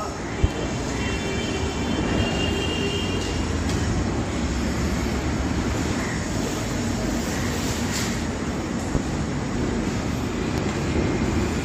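Sharp, brief pops punch out well above the surrounding sound at 0.44–0.47 s, 8.95–8.98 s and 10.58–10.61 s, with the middle one the loudest at roughly 20 dB over the signal. Each loud pop is likely a voltage spike from a switch, plug or static discharge.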